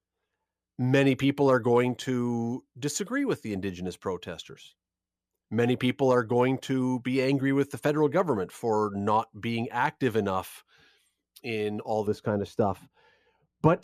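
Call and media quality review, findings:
De-emphasis applied wrongly, 12.07 to 13.84 s, after "in all". Speech turns dull and muffled; treble rolls off smoothly, about 11 dB down at 10 kHz relative to 1 kHz. Treble-cut filter running on audio with no pre-emphasis, or applied twice.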